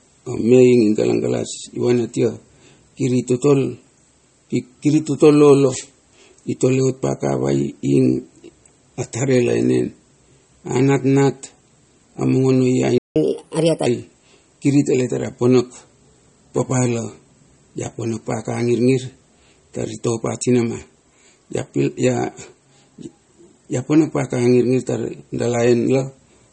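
Likely MP3 compression runs through the whole speech clip. A starved encoder switches weak frequency lines on and off between frames, which fits a bitrate near 32 kbps. The result is watery speech with swirling, metallic sibilants and softened attacks.

From 12.98 to 13.16 s there is a playback stall, likely because the player ran out of data or its thread was blocked. The output falls silent for about 0.18 s, cutting the speech off mid-flow before it resumes.

From 13.16 to 13.86 s the player performs a catch-up at higher speed, resampling its backlog to recover the lost time. The speech runs 1.25 times fast and about four semitones high, with a chipmunk-like lift, then drops back to normal speed and pitch.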